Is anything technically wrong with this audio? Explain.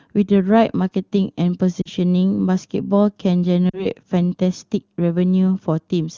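Yes. There are two short dropouts from lost AMR speech frames, at 1.82 to 1.89 s and 3.70 to 3.86 s. Each gap matches about 40 ms of missing speech, which fits two consecutive 20 ms frames failing their checks. The decoder fills the gap by repeating the last good pitch and vocal tract settings at falling gain, so the speech briefly smears and dips before recovering weak or rough. The wideband codec codes speech up to 6.4 kHz and fills 6.4 to 7 kHz with shaped noise, and its high rate shows no obvious coding damage.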